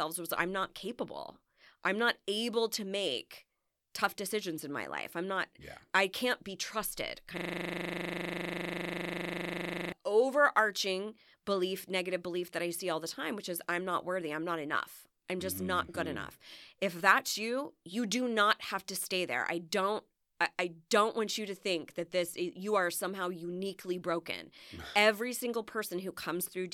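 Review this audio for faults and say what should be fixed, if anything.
From 7.38 to 9.92 s, a system hang loop replays one 40 ms slice 64 times, producing a 25 Hz buzz: the host stalled while the hardware recycled its ring buffer. The waveform shows identical repeating blocks, and the spectrogram shows frozen content striped every 40 ms. A watchdog that mutes output when the buffer stops refilling would prevent this.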